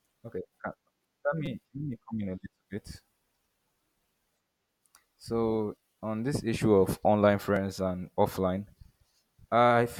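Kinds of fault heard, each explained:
Repeated buffer: when fresh audio failed to arrive in time, the playback device replayed its last block of speech, so a tiny slice sounds again with a hard join at each repeat. Here the slices are about 5.8 ms long, which fits a 256-sample buffer. At 1.46 s the slice seems to repeat several times, and at 7.56 s only once. Both are heard as brief clicks or a short buzz rather than an audible stutter. Unlike a dropout, no silence or gap appears.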